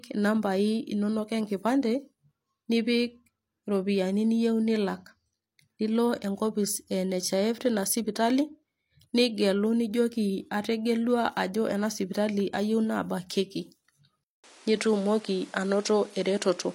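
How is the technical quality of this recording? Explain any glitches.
The recording has one clear fault near the end. At 14.24 s the sound cuts out for about 200 ms, then returns changed until the clip ends at 16.75 s. This is an input switched to a poorer device, likely. The new input passes nothing above 11.4 kHz, so the speech loses its top end and sounds duller. A new background noise sits about 30 dB below the speech. The level stays about the same.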